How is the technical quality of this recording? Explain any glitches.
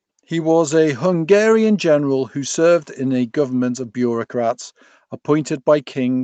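The technical quality of the recording holds up, with no glitches to explain.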